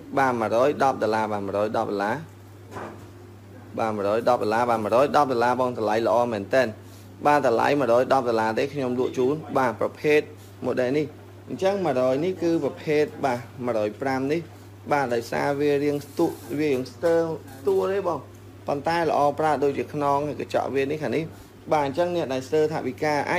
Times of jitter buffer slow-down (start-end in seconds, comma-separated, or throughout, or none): none